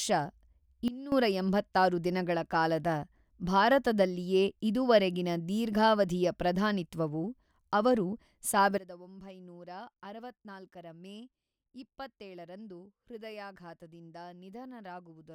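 At 0.88 s the speech and its background noise drop together by about 16 dB. They recover at 1.12 s. At 8.78 s they drop by about 18 dB and stay down to the end. This is a sudden gain jump, likely an unramped digital gain change.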